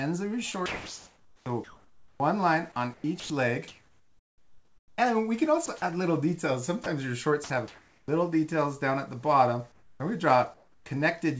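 From 0.52 to 2.20 s, 2.72 to 4.98 s and briefly at 5.66 to 5.82 s, the sound is chopped, likely by the sender's voice detector toggling transmission. Quiet portions, about 1.4 s and 1.5 s in the longer stretches, become synthetic fill.

At 6.84 s and again from 7.44 to 7.50 s, short pieces of sound, 20 ms and 60 ms, are dropped, likely because the detector misread them as background. Steady noise briefly stands in for the signal before it resumes.

From 7.44 to 8.08 s, 9.72 to 10.00 s and 10.54 to 10.86 s, comfort noise replaces the real background, likely because transmission paused during silence. The detailed ambience becomes a flat, featureless hiss, about 5 dB quieter in the second gap and about 2 dB in the third.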